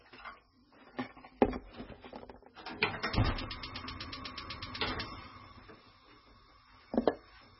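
From start to finish the sound is dull and watery, with a swirling, warbling texture and smeared, softened attacks, and nothing at all comes through above about 5.6 kHz. This is likely heavy MP3 compression at a very low bitrate, which fits something around 16 kbps. Starved of bits, the encoder cut the treble at a fixed point and dropped weak frequency lines that flicker in and out from frame to frame, producing the swirl.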